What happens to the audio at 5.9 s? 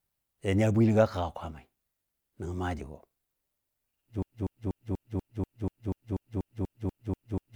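At 5.9 s the speech is stuck in a broken-record loop. It begins at 4.23 s and runs to the end of the clip. A fragment of about 0.24 s plays back to back, 14 times in all, with each pass identical. The sound becomes a rigid, stuttering cycle with no forward progress. The likely cause is a stalled player or stream that kept resending its last buffered piece. The speech that should have followed 4.23 s is lost.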